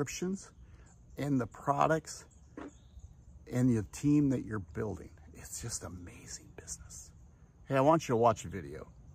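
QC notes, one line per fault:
No faults heard anywhere in this clip.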